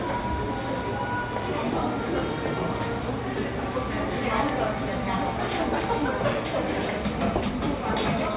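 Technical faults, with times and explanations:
The signal holds steady with no audible technical faults anywhere in the recording.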